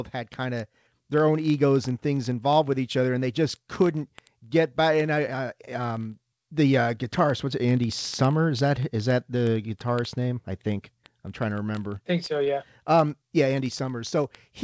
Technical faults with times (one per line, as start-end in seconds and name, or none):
0.10-14.63 word clock ticks
12.44-12.48 short concealed packet loss